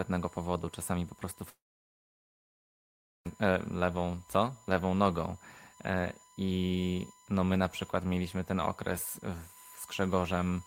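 A USB whine runs through the whole speech clip, a fixed 1 kHz tone about 30 dB below the speech, leaking in from the bus's 1 ms frames and showing as a flat spectrogram line. From 1.49 to 3.27 s the sound falls away, likely a long network dropout: a brief fading buzz, then near-silence for about 1.7 s on the waveform, with the lost audio never returning.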